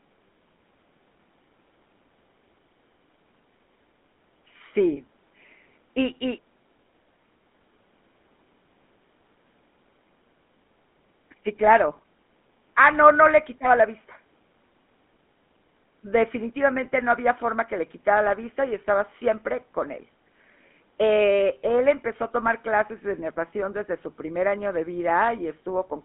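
Speech run through a GSM full-rate codec, start to finish. The line band sits around 200 Hz to 3.5 kHz, with nothing above 3.7 kHz, and the plainly audible buzzy, gravelly grain from the pulse-driven vocal-tract model fits a 13 kbps stream.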